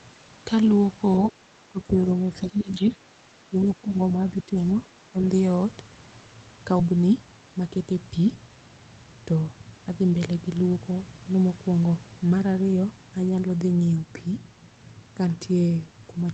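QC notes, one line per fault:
1.27–1.31 s, other side's voice leaking through: a faint scrap of a second voice, about 20 dB below the speech, likely residual loudspeaker echo the canceller missed.
1.29–1.38, 1.69–2.10, 2.30–2.98, 3.42–3.98, 4.18–4.57, 5.11–5.24 s, speech suppressed in double talk: the talker dips by roughly 10 to 20 dB in patches, likely the echo canceller attenuating everything while both sides spoke.
6.79–6.81 s, skip ahead: playback jumps forward with no fill, losing around 0.4 s of speech, as a stretch of audio was dropped while later audio was already waiting.
6.89–7.84 s, jitter buffer speed-up: speech runs at 111% speed with pitch unchanged, sounding hurried, as about a tenth of a second of pitch periods is trimmed out to reduce delay.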